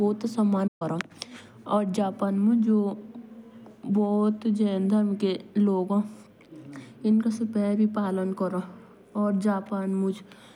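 At 0.67 s the speech cuts out and stays silent until 0.82 s, about 130 ms. This is a playback stall. The player likely ran short of data or its thread was blocked. Sound resumes on "कोसिन जापान".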